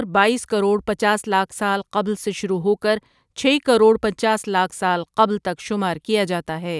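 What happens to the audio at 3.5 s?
Nothing goes wrong at 3.5 s; the audio plays through that moment intact, with no dropout, click or other fault.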